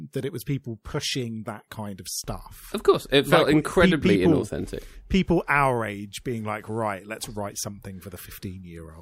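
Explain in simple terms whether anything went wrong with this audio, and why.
Nothing went wrong; no problems can be heard anywhere.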